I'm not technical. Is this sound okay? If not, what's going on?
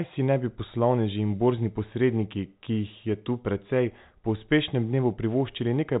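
Yes, nothing in this recording sounds wrong.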